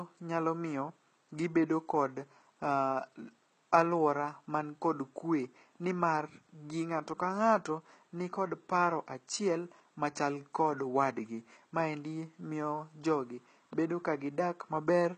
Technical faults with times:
0.00-15.18 HE-AAC compression

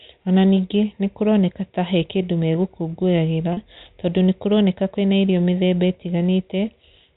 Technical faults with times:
3.53-3.57 packet loss with pitch repetition

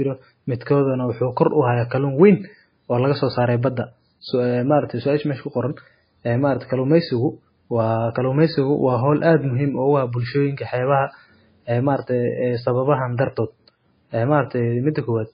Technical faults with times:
0.00-15.34 MP3 compression

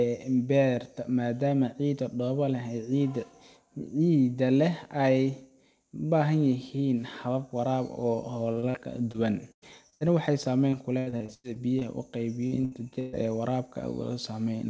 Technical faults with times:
8.52-10.02 repeated packet loss (robotic sound)
10.70-11.83 repeated packet loss (robotic sound)
12.47-13.15 repeated packet loss (robotic sound)

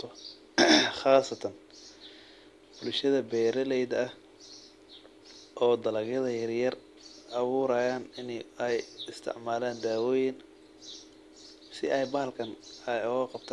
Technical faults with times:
none

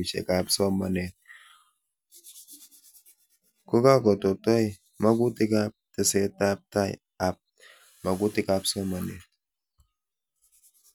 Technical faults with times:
none

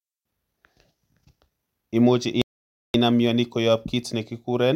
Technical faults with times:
2.42-2.94 playback stall

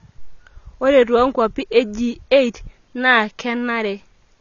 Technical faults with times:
0.00-4.41 AAC compression

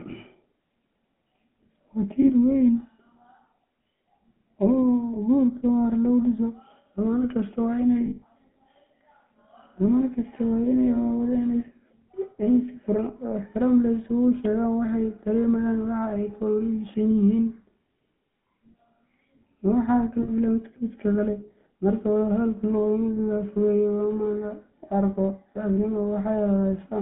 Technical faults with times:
0.00-27.01 GSM full-rate codec
2.22-2.31 lost GSM frames
3.98-4.00 lost GSM frames
8.06-8.24 lost GSM frames
20.22-20.31 lost GSM frames

